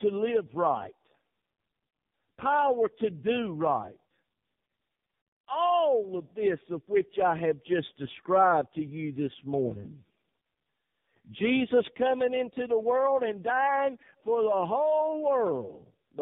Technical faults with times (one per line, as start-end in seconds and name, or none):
0.00-16.21 tandem speech coding